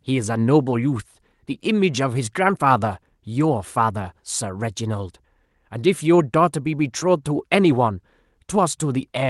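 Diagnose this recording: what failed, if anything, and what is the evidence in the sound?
Nothing failed in this speech recording: it carries the expected signature of a WebRTC call path, with the spectrum topping out around 12 kHz in a way that fits Opus coding at about 40 kbps, and the signal holds steady throughout with no audible disturbance beyond that coding character.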